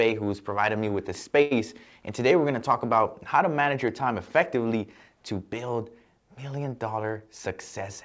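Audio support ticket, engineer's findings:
Short stall from a late packet, 1.42–1.53 s, right after "provided me with the". Sound gets held for about 90 ms with a faint buzz or dip, then picks up where it left off. Nothing lost. Jitter buffer ran dry and the receiver stretched the last bit until the packet turned up.

Call path itself is band-limited at 8 kHz, which fits G.722 wideband. That's just the codec, not part of this fault.

Bit error spike at 3.88 s, between "about how to manage" and "time effectively". One sharp broadband tick with no relation to the audio around it. Single-sample hit: a flipped bit in memory or on a digital link jumps the value by a power of two and it snaps straight back.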